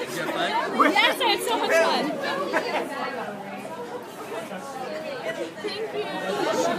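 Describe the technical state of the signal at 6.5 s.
At 6.5 s the signal is intact, with no audible technical fault at that point.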